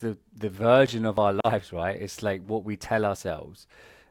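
At 1.17 s the speech has an overlap between stream segments. Two segments carried time stamps that overlapped. The player cut that overlap away, removing about 6 ms of real sound. The waveform jumps there, heard as a tiny skip.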